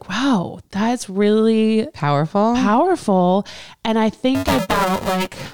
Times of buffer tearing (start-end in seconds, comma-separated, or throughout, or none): 4.35-5.53